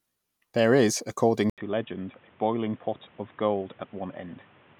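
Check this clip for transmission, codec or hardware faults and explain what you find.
One fault is present. From 1.50 s, after "is according", the input likely switched to a poorer device. Its narrower band cuts everything above 3.8 kHz. After an 80 ms silence, the speech turns dull, slightly quieter, with new background hiss.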